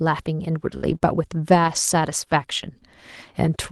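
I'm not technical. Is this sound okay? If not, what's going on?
No, there are a few brief glitches, all in the first half.

Burst of packet loss, 0.77 to 0.84 s: a few pieces of the call arrived too late, so the last sound was stretched and faded, then the speech skipped ahead, leaving about 40 ms missing.

Lost packet rebuilt from error correction, 0.82 to 0.96 s and again at 1.64 to 1.78 s: lost pieces were replaced by rougher backup copies, so the speech sounds briefly grainier, with no gap.

Short concealed packet loss, around 0.98 to 1.02 s: about 20 ms never arrived, and the gap was patched by continuing the previous sound, heard as a tiny smear or wobble.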